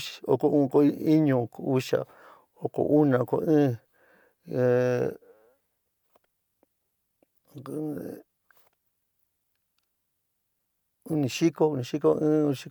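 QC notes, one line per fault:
Nothing to flag here; the speech comes across without any problems worth noting.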